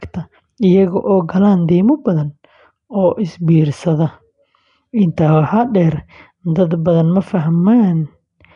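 Throughout the clip, the speech has been squeezed through a low-rate transform codec, likely Nellymoser compression. Weak bands are starved of bits and refilled with noise, which gives a rough, hissy halo and a smeared, underwater tone. Nothing reaches above 10.6 kHz, and the plainly audible damage fits a bitrate of about 44 kbps.

At 5.16 s, the codec's quantisation noise, sized for a sudden loud attack, spills into the quiet instant just before it. The result is pre-echo: a brief hiss of about 12 ms runs ahead of the onset, and the attack itself sounds softened and blurred.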